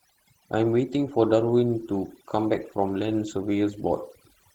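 A short speech recording carries two faults from start to finish. The first is overdone noise removal. The denoiser was set so aggressively that it pulls individual frequency bands far down or shuts them off whenever they sit close to its noise estimate. The pauses therefore fall to near silence scattered with twinkling specks, and the quieter parts of the voice are stripped away. A spectrogram shows a dark floor dotted with isolated bright flecks, with ragged, hollowed-out gaps inside the voice's own energy. The second fault is Opus voice compression in hybrid mode. A linear-prediction coder handles the lower band, and a transform layer covers everything above 8 kHz. The coarse excitation makes the voice sound hoarse and faintly robotic, which fits a low bitrate around 16 kbps. On a spectrogram, the region above 8 kHz looks blocky and smeared, changing in steps consistent with 20 ms frames, rather than showing smooth detail.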